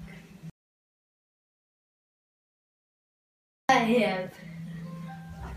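At 0.50 s the sound cuts out into an audio dropout to silence. It returns at 3.69 s, after about 3.2 s of silence with no room tone. The input was likely lost while recording continued writing silence. Anything during the gap is gone.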